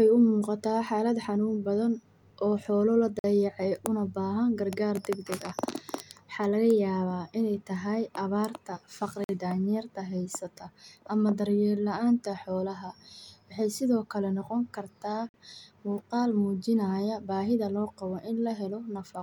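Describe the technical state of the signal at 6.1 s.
At 6.1 s the audio is intact, with no fault present at that moment.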